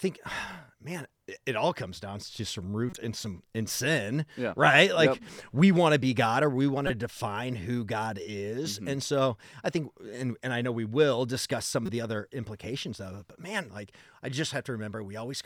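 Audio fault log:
2.90–2.98 s, 6.87–6.90 s, 11.86–11.89 s: corrupt frame decoded. A few damaged frames got played anyway, throwing energy to wrong frequencies, so you hear brief chirpy blips, loudest after "or we want".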